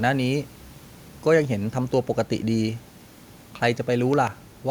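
At 4.14 to 4.29 s two sharp thumps land in quick succession, a loud pop peaking roughly 10 dB above the speech, likely from a sudden voltage step such as a plug or switch. Unlike a dropout, the speech and faint room noise carry on underneath.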